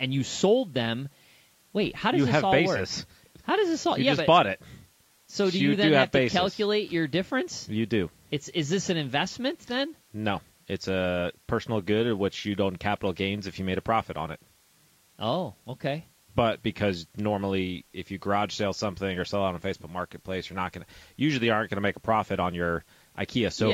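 Right through the speech there's a rough, grainy texture, with a hiss filling the gaps between the harmonics and a thin, synthetic top end. That's plainly audible damage, likely from low-delay AAC compression (AAC-ELD), whose short frames smear pitch detail at a rate that sounds like about 32 kbps.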